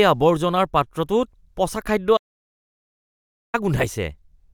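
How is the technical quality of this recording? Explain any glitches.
The recording has one clear glitch, an audio dropout to silence, and it takes out a chunk of the speech.

Right after "পচা খাদ্য", at 2.17 s, the sound cuts off abruptly and stays dead until 3.54 s, losing about 1.36 s. The likely cause is a brief loss of the input signal, such as a disconnected device or failed link, while recording continued writing silence. There is no room tone in the gap, just total silence. On a waveform it is a flat line, and on a spectrogram a fully blank vertical band with hard edges.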